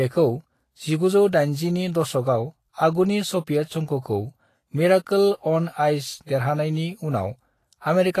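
Throughout the speech, the treble sounds hissy and grainy, with roughened tones and softened consonant edges, and nothing is present above 14.2 kHz. This is likely Vorbis compression at a low bitrate, around 33 kbps, quantising the upper spectrum so coarsely that detail turns into noise.

From 6.26 to 6.29 s, a brief hiss runs ahead of a sharp onset, which sounds smeared rather than crisp. This is pre-echo: quantisation noise sized for the loud attack spreads across its transform block, filling about 23 ms of quiet beforehand.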